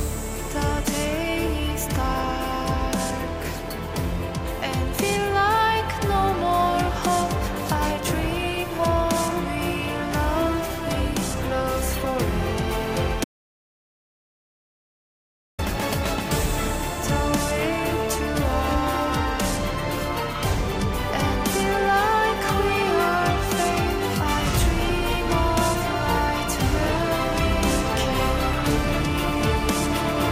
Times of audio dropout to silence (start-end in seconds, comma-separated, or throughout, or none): 13.24-15.59